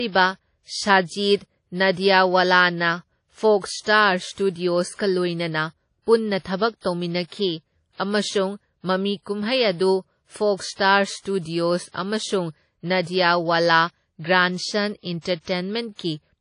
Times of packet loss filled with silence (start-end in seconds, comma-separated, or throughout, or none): none